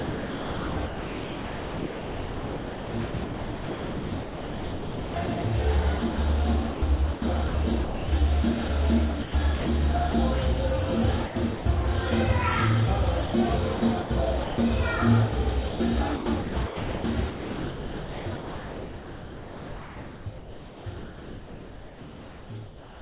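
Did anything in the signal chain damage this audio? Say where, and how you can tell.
Yes. Call processing likely chopped the sound through its voice detector: 0–5.44, 5.98–6.18, 6.74–8.08, 9.22–10.14, 11.26–11.66, 13.26–14.58, 15.68 s to the end. Comfort noise flickers in and out.

Sound dropped by the voice detector at 8.68–8.70 s. A brief bit of sound gives way to steady noise or near silence. The sender likely judged it to be background and stopped sending.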